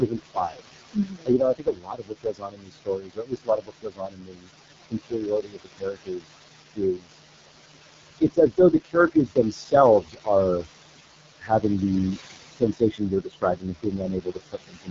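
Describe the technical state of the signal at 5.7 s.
At 5.7 s the speech is cut by the noise suppressor. From 4.9 to 6.31 s it mistakes parts of the speech for noise and pulls them down by up to about 22 dB, so around a second of sound comes out swallowed and faint.

The noise suppressor artifacts run throughout the clip. The suppressor lowers the steady room noise by about 20 dB between phrases and lets it rise under the speech.

Throughout, the AMR wideband (HD Voice) codec is also heavily degraded. The rough, raspy quality fits its lowest 6.6 kbit/s mode, and nothing is present above 7.5 kHz.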